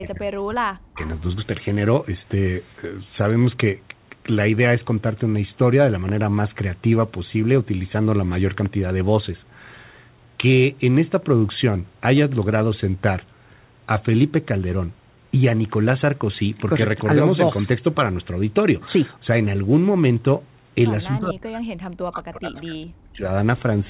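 From 0.00 to 1.02 s, and again from 21.07 to 23.24 s, the speech sinks sharply, by as much as roughly 40 dB. That is speech suppressed in double talk, likely from the echo canceller treating the near talker as loudspeaker echo while the far side spoke, and turning both down. Everything sits below 4 kHz, which fits a narrowband G.711 mu-law call path.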